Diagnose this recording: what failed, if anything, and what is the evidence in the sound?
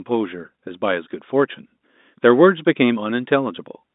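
Nothing in the signal chain has failed: the speech sits in an ordinary telephone band of roughly 200 Hz to 3.7 kHz, consistent with standard G.711 telephone coding, with no dropouts, distortion, or timing disturbances anywhere in the recording.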